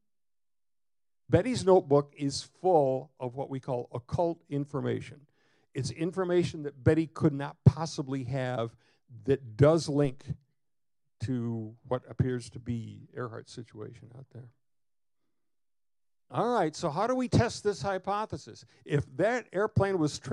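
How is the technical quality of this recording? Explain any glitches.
There is one glitch. At 10.05 s a DC step occurs. The waveform's zero line jumps by about -34 dBFS, then drains away as a 2 Hz high-pass pulls it back. The sudden shift is heard as a brief low thump, while the sound continues unchanged.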